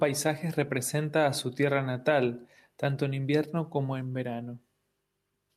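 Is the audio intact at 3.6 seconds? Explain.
Yes, the audio at 3.6 seconds is intact, with no fault audible at that moment.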